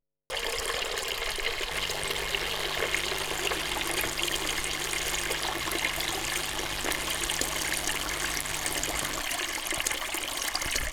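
A recording of sounds carries mains buzz from 1.71 to 9.21 s, roughly 10 dB below the sound. Unlike a smooth 50 Hz hum, its switching spikes add a raspy series of harmonics reaching several kilohertz.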